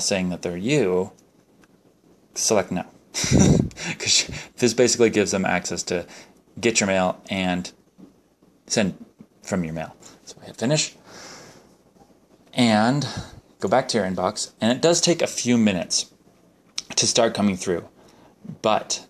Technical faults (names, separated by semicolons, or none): none